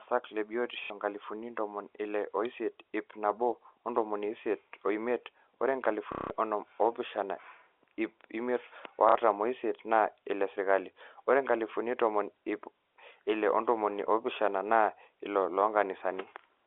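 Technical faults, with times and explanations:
0.84–0.90 s, 6.12–6.30 s and 9.09–9.15 s, packet loss with last packet repeated: the last received chunk of speech loops until fresh audio returns, buzzing at about 33 Hz, which fits 30 ms packets. A loss with silence or a smooth fade would leave a gap rather than this robotic stutter.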